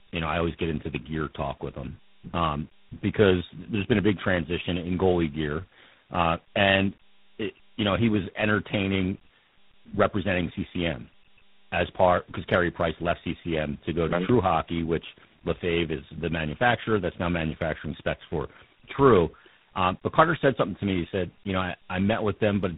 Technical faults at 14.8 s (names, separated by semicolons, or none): tandem speech coding